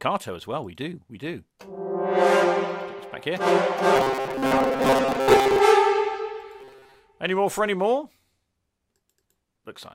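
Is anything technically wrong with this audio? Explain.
Yes. Robotic sound from repeated short buffers at 3.96–5.59 s and 6.61–6.99 s: a rigid 134 Hz buzz, likely from one 7.5 ms chunk replaying, showing as identical waveform cycles and evenly spaced spectrogram harmonics.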